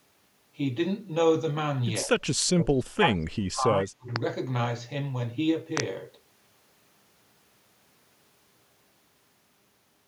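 A speech clip with speech suppressed in double talk: a shallow dip around 2.05–2.15 s, then a deep cut of about 30 dB from 2.54 to 4.10 s, likely an echo canceller ducking during double talk.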